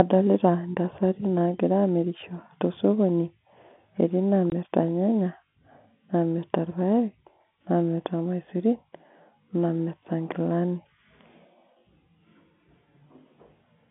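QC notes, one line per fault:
4.50–4.52 s, packet loss filled with silence: the signal drops out completely for 20 ms, which fits a single lost 20 ms packet, and the receiver inserts silence rather than concealing the gap. The sound stops and restarts abruptly instead of fading. The dropout is heard through the narrow G.711 telephone band, roughly 150 Hz to 3.5 kHz.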